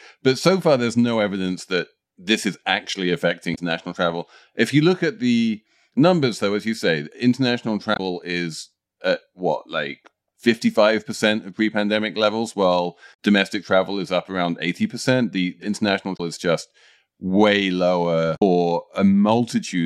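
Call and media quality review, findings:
Damaged data in a compressed stream: short glitches at 3.52 s (after "that this is actually"), 7.93, 13.10, 16.13 and 18.33 s, 40–90 ms each. Decoder loses sync and searches for the next frame header. Spectrogram shows broadband vertical smears; waveform jumps abruptly.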